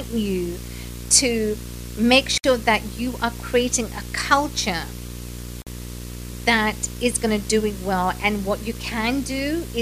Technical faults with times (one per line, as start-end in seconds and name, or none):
0.00-9.81 video or display buzz
2.38-2.44 gap at a join of encoded pieces
5.62-5.67 gap at a join of encoded pieces